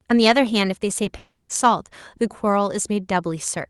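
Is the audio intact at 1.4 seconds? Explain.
No, 1.4 s falls inside a long network dropout running from 1.17 to 1.51 s, likely from packets that never arrived. The receiver stretches the last sound into a fading buzz, then leaves about 110 ms of silence before the audio resumes, minus the lost stretch.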